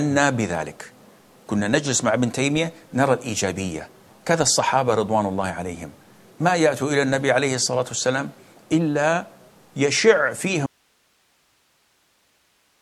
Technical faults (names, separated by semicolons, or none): audio dropout to a faint residue